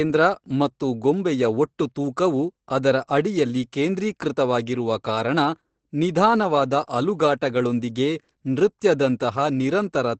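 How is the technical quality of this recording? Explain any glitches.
The recording is noticeably degraded by Opus voice compression, which runs through the whole clip. Every part of the speech has been squeezed through the low-rate SILK linear-prediction coder. It models the voice as a filter driven by a crudely quantised excitation and drops the band to wideband. The result sounds muffled, slightly hoarse and faintly robotic, which fits a bitrate of about 12 kbps. On a spectrogram, energy stops sharply near 8.6 kHz, leaving an empty band above. Harmonics look smeared and grainy, in blocks that fit 20 ms frames.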